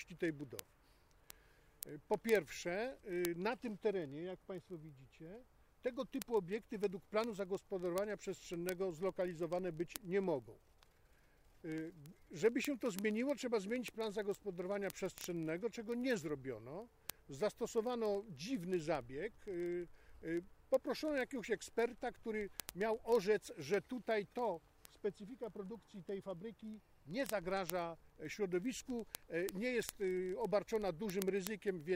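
Word clock ticks run from 0.13 s to 31.93 s: an unlocked receiving clock slips one sample roughly every 30 ms, giving a fast, sharp, uneven ticking throughout.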